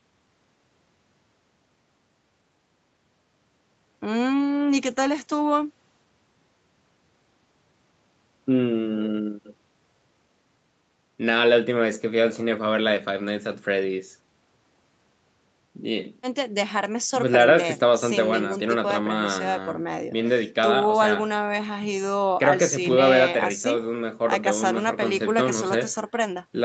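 No faults detected in the speech; nothing sits above 8 kHz, as expected from a wideband call path, and the call's microphone processing and codec stage leave nothing audible beyond that band limit.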